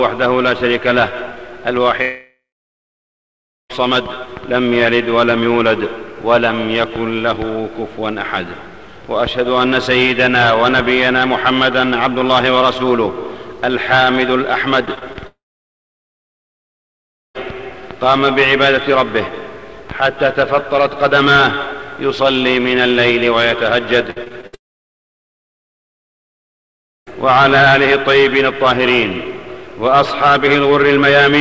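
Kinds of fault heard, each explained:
Long network dropout: at 2.02 to 3.71 s, 15.27 to 17.36 s and 24.55 to 27.08 s the sound likely stopped arriving. The last sound is stretched into a fading tail, then silence for about 1.25, 1.97 and 2.48 s, and audio resumes further on with the lost portion gone.
Repeated packet loss (robotic sound): at 14.85 to 15.17 s and 24.10 to 24.55 s, packets went missing again and again, four then five times, with gaps up to 25 and 60 ms. Each hole was patched by extending the previous sound, leaving choppy audio with pieces missing.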